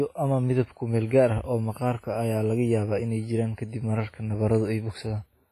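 From start to end the speech carries heavy WMA compression damage, with a ringing, washy hiss that breathes with the signal. The bandwidth stops near 15.4 kHz, which fits a low bitrate around 24 kbps as the likely cause.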